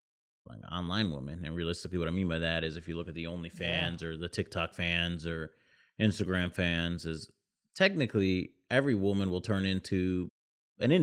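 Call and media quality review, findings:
No faults found; Opus path at 24 kbps nominal.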